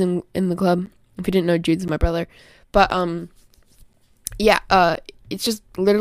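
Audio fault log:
0.86–4.97 s, periodic USB or driver dropouts: starting just after "in in the club", about five brief silent gaps of roughly 10 ms recur every 1.02 s, so regular ticks cut into the speech.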